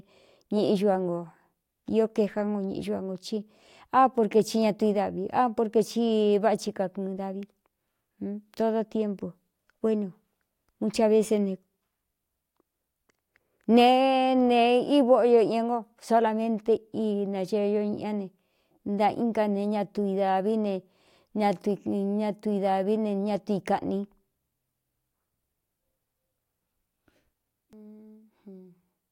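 No technical faults can be heard anywhere in the speech recording, and the signal stays steady and intact throughout.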